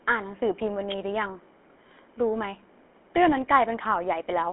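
GSM full-rate codec throughout: speech is rebuilt from a vocal-tract model driven by sparse, regular pulses, leaving an audible buzzy roughness and nothing above 3.8 kHz.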